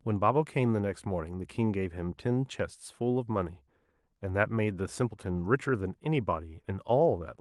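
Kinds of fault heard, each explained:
No kinds of fault are heard in this speech; the call path it passed through behaves as a call path should.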